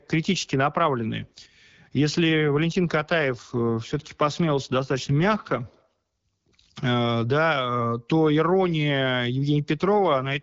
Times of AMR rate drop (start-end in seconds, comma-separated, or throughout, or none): 2.30-5.88, 9.87-10.42